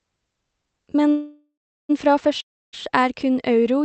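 From 1.09 to 1.91 s a call audio freeze likely leaves the jitter buffer empty. A fading buzz gives way to silence, shown as a flat waveform and a blank spectrogram, before the sound resumes intact.

From 2.41 to 2.75 s a long network dropout fades to about 0.29 s of flat silence. Sound likely lost in transit, around 0.32 s, never returns.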